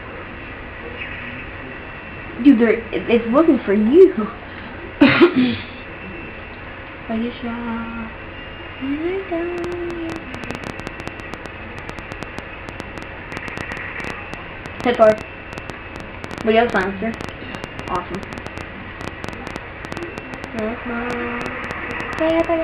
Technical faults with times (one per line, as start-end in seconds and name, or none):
9.58-22.45 train of clicks